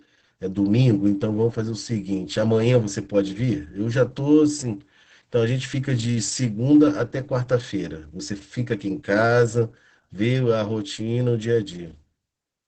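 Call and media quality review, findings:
Opus voice compression, whole clip: speech muffled, hoarse, faintly robotic, band capped near 8 kHz. Coarse SILK excitation, which fits about 10 kbps. Unlike a plain low-pass, the grain is audible.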